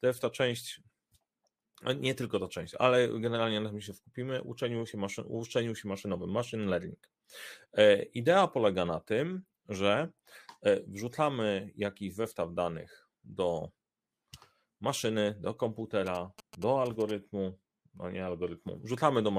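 GSM signalling bursts from a nearby 2G phone, rectified in the audio circuit, add galloping 217 Hz buzzes after "maszyny do", 16.06 to 17.11 s.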